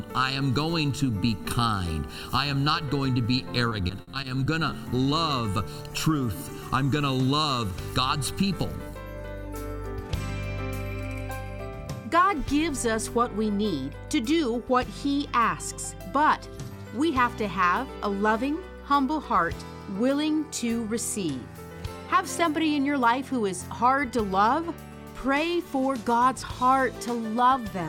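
From 3.69 to 4.74 s there's repeated packet loss, the robotic-sounding kind: seven holes in quick succession, the longest 60 ms. About 170 ms was patched by stretching the last sound, around 16% of that span, and 120 ms is simply missing, so it comes out choppy.

Then at 26.03 to 26.71 s you get a jitter buffer speed-up. The receiver had built up extra delay and trimmed it by cutting tiny pitch-period slices, around 40 ms in total, so the audio runs at 105% speed with unchanged pitch and sounds hurried.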